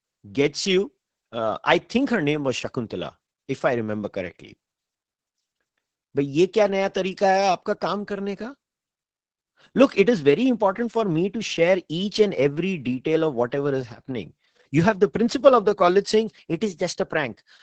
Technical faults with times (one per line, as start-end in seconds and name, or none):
0.00-17.63 Opus voice compression